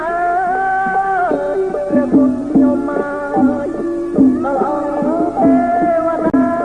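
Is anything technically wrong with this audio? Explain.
Yes. From 3.25 s to the end, the sound turns rough and muffled, with the high frequencies cut away. This is a call bitrate drop: the encoder was told to use far fewer bits, which fits a fall from about 128 kbps to roughly 20 kbps, coding more coarsely.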